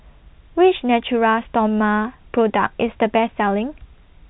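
Speech over a narrowband telephone channel with nothing above about 3.9 kHz, consistent with 64 kbps G.711 A-law coding, and no technical fault is audible.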